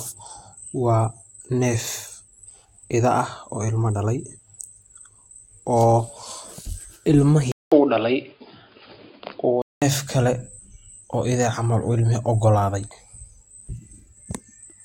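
At 7.52 s the audio drops out for about 200 ms, then returns dull and boxy, with nothing above 5 kHz and a faint new background noise roughly 45 dB below the speech. The level stays about the same. At 9.82 s the full, clear sound comes back. The likely cause is the input switching to a poorer device, a narrower-band microphone or headset call profile, for just over two seconds before the original input resumes.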